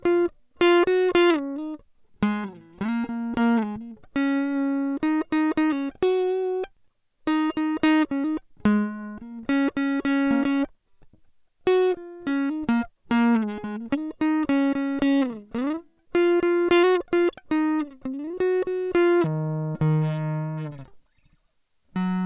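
From 19.24 s to the end at 22.26 s, the music drops into a wrong sample rate fault. It plays at half speed and a full octave lower, which fits 16 kHz material played back at 8 kHz without conversion. Unlike a pitch shift, tempo and pitch fall together.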